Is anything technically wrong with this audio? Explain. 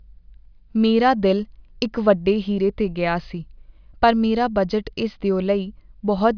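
No, nothing is technically wrong with this audio.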